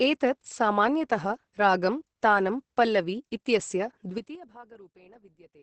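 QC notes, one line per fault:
Throughout: Opus voice compression. The speech is coded at a very low rate, about 10 kbps, and the damage is heavy. Nothing is left above about 8.6 kHz, which dulls the sibilants, and the coarse excitation coding makes the voice hoarse and slightly robotic. That fits the SILK linear-prediction coder working in wideband. Unlike a plain low-pass filter, which only muffles, this adds a rough, buzzy texture to the voice.
4.10 to 4.44 s: zipper noise. The level falls by about 25 dB in a third of a second. It drops in steps of 6 dB, about ten per second, with no smoothing between them, and each step leaves a small click. The result is a ticking, zipping edge on the fade.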